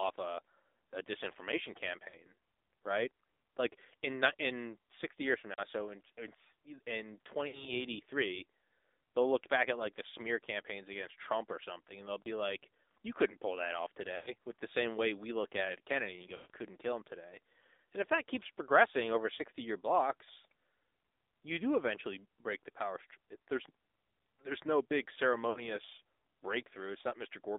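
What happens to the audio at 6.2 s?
Thin, buzzy, synthetic speech, confined to 300 Hz to 3.7 kHz, here and throughout: the AMR narrowband mobile codec rebuilds the voice from sparse pulses.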